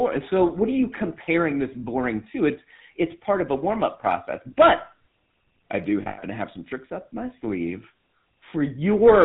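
Throughout the speech, the signal has been squeezed through the GSM full-rate codec, which fits a 13 kbps bitrate. That codec rebuilds the vocal tract from a filter model excited by sparse, regularly spaced pulses, and discards everything above 4 kHz. The damage is plainly audible: the voice has a dull, band-limited top and a buzzy, gravelly grain laid over every syllable.

From 6.02 to 6.19 s, between "i do" and "to have some tricks", lost GSM frames break up the stream. About 140 ms of frames go missing, scattered over 160 ms, with the longest run roughly a tenth of a second. The decoder fills each gap by repeating the last good frame's settings, so the sound smears into a rough, metallic ring instead of continuing cleanly.

A second, single lost GSM frame sits at 8.50 to 8.53 s, just after "tricks up my sleeve". Only 20 ms is concealed here, so the decoder's repeat of the previous frame is brief. 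It registers as a short, rough, metallic ring in the flow.

From 9.05 s to the end, hard clipping sets in. The level arriving at some stage is about 6 dB more than that stage can pass, so every waveform peak is sliced flat. Those squared-off tops spray harmonics high into the spectrum.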